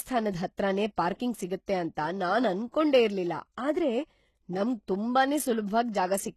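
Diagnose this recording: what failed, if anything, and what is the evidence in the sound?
Codec stage: the whole speech recording carries plainly audible HE-AAC compression damage. Nothing reaches above about 12.3 kHz, and the treble below that cut-off sounds synthetic. Sibilants come out gritty and lispy because the upper band is rebuilt from copied lower bands, not coded directly, which is likely HE-AAC spectral band replication at a rate around 16 kbps. A spectrogram would show a hard ceiling at 12.3 kHz, with smeared, repeated-looking texture in the high band.

Pre-echo, from the same transform coding, appears at 0.96 s (about 19 ms) and from 5.92 to 5.94 s (about 24 ms). Before each sharp onset there is a brief hiss, and the attack itself sounds softened. The quantisation noise belongs to the loud part of the block but is spread across the whole block, so it leaks into the quiet moment just ahead. 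On a waveform this shows as a low fuzzy ramp ahead of each transient. On a spectrogram it is a faint broadband smear leading the onset.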